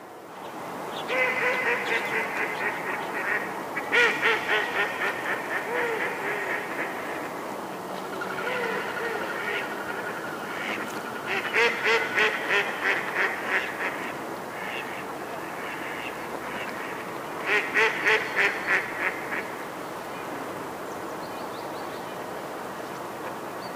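Hard clipping from 3.94 to 4.32 s and again from 17.52 to 19.08 s: the signal is driven about 4 dB past what the stage can pass, so its peaks are sheared flat, adding high harmonics heard as crackle on the peaks of the sound.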